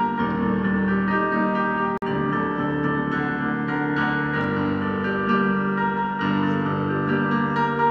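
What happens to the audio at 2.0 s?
The sound drops out into a gap of about 47 ms, from 1.98 to 2.02 s, with smeared edges, then resumes where it left off. This is a gap at a join of encoded pieces: separately encoded segments were spliced untrimmed, leaving encoder delay and final-frame padding in place.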